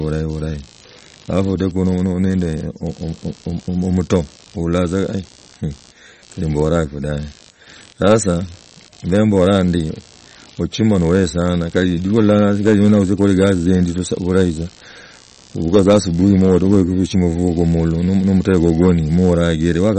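From start to finish the speech carries computer activity noise: a buzzing, scratchy pulse train at around 70 pulses per second, sitting roughly 30 dB below the speech. Processor or peripheral load is modulating the shared ground, so the buzz follows the machine's activity rather than the speech.

Hard clipping runs through the whole clip as well. The level was pushed about 7 dB past what the chain could pass, so peaks are sliced flat. Only a small fraction of samples, under one percent, hit the ceiling.

The whole clip also has a watery, swirling texture, with smeared consonant onsets and nothing above 8.4 kHz. This is likely MP3 compression at a low bitrate near 40 kbps, where the encoder drops the treble and lets weak frequency components flicker between frames.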